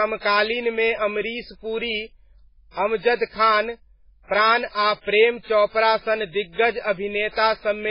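Throughout the speech there is heavy MP3 compression damage, likely from a very low bitrate, fitting about 16 kbps. Nothing survives above 5.2 kHz, so s sounds turn dull and watery. A spectrogram shows a flat ceiling at 5.2 kHz over patchy, flickering blocks.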